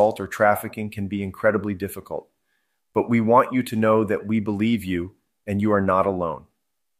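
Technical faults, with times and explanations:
Nothing stands out as a technical fault here; the speech just comes through as you'd expect.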